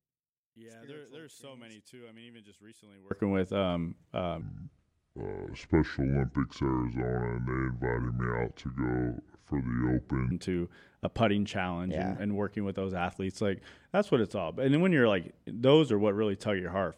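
From 0 to 3.11 s, before "with um", the speech drops about 27 dB and sounds faint, likely one channel inverted cancelling the centre in mono.

From 4.41 to 10.31 s, between "with um" and "to a putting challenge", there's a section at the wrong speed. It runs at 0.663x, slow and deep by roughly seven semitones, likely from a clock mismatch.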